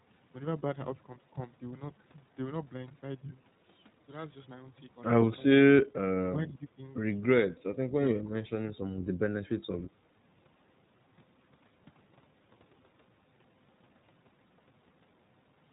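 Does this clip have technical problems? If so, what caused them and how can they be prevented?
Yes. The iLBC codec affects the whole clip. The speech is band-limited, with nothing above 4 kHz, and it has a plainly audible rough, slightly synthetic texture. Each short frame's excitation is coded on its own with a small bit budget, so fine detail in the voice is lost and the sound becomes buzzy. The character fits 20 ms frames at 15.2 kbps. To prevent this, use a wideband codec such as Opus at a healthy bitrate wherever both ends support it.

Speech suppressed in double talk occurs in three places. At 6.32 to 6.81 s the voice dips by about 10 dB. At 7.47 to 8.04 s it drops much deeper, by about 30 dB, nearly cutting out. At 8.23 to 8.37 s it briefly falls by about 20 dB. The likely cause is an echo canceller that could not tell the near talker from loudspeaker echo while the far side was speaking, so it attenuated everything. 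To prevent this, use an echo canceller with robust double-talk detection and reduce acoustic coupling with headsets or better speaker placement.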